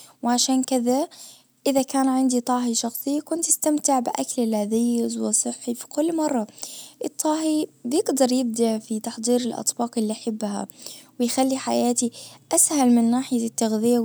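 No technical faults are audible.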